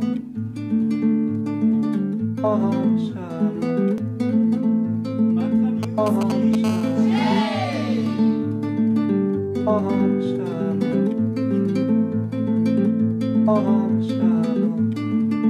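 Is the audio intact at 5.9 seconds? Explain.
No. From 5.83 to 6.55 s there are GSM signalling bursts: a nearby 2G phone's radio pulses, rectified by the audio circuit, give galloping ticks and short 217 Hz buzzes about 10 dB below the signal. Their clustered dit-dit-dit rhythm sets them apart from steady mains hum.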